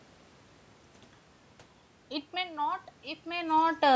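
It's a short speech clip, and from about 2.3 s to the end at about 3.95 s you can hear automatic gain rising: the level at the microphone dropped by about 15 dB, so the automatic gain control crept its gain up by about 6 dB. That's why the voice and the room noise behind it swell together over that last second and a half rather than jumping.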